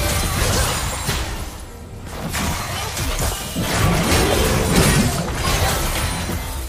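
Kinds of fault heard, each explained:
Listening through the clip, nothing stood out as a technical fault.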